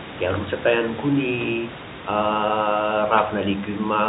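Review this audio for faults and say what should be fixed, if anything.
No faults turned up in this audio, so nothing needs to be fixed.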